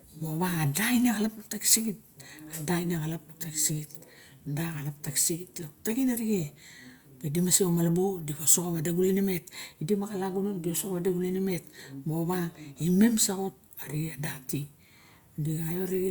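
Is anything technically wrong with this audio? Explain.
No, the speech signal in this clip shows no technical faults.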